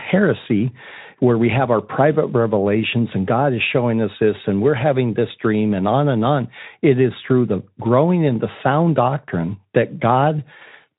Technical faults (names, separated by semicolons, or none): none